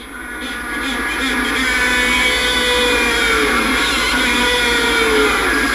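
No technical faults can be heard anywhere in the audio. Nothing breaks, drops out or distorts at any point.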